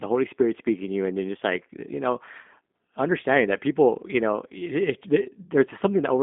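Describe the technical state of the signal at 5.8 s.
At 5.8 s the speech carries G.729 codec damage, present throughout the clip. The coder models each 10 ms frame with a vocal tract filter, a pitch predictor and a few pulses, which leaves the voice plainly rough and synthetic, consistent with an 8 kbit/s G.729A stream. On a spectrogram, energy stops flat at about 3.8 kHz with nothing above, and the band thins below 200 Hz.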